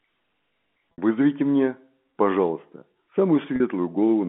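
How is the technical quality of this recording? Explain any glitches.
Two brief glitches are audible in the telephone-band speech. Both are packet loss with pitch repetition. At 0.92 s, about 60 ms drops out, which fits three lost 20 ms packets. At 3.56 s, about 40 ms drops out, which fits two. The receiver filled each gap by looping the last pitch cycle, so the sound briefly holds with a slightly buzzy, frozen tone. A plain dropout would leave a silent hole or a click instead.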